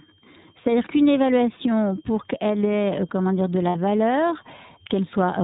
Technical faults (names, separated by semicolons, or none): switching supply whistle; iLBC codec; lost iLBC frames